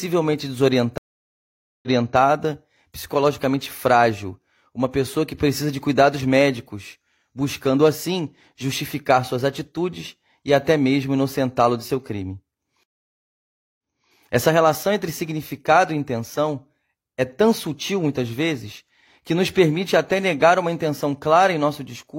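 At 0.98 s there's a stream reconnect: the connection dropped, the player sat silent for about 0.85 s, then reconnected and spun up a fresh decoder mid-stream. The server resent a bit of backlog, so the speech picks up 325 ms earlier than where it cut off. The same thing happens at 12.83 s, with roughly 0.95 s of silence and again a 325 ms jump back, so you hear a short stretch repeated.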